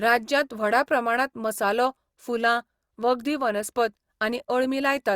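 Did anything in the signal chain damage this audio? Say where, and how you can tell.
Yes: a bit error spike at 2.41 s, just after "प्रमाणांत मसालो", a single-sample broadband tick from one flipped bit in memory or a digital link, unrelated to the speech, unlike a dropout's gap.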